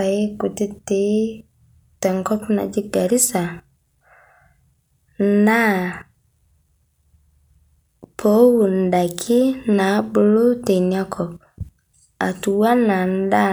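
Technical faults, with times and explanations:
No technical faults detected.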